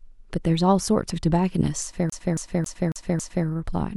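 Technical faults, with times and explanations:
2.10 to 3.47 s, CD stuck on one turn: the same 0.27 s slice of speech comes round five times with a tiny dropout at each restart, because a scratch keeps kicking the laser back one track every revolution. That gives the quick, even skipping-disc stutter.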